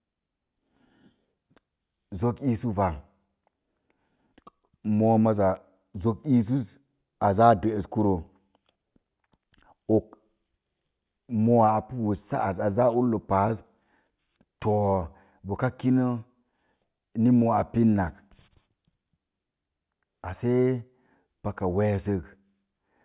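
No technical faults detected anywhere in the speech recording.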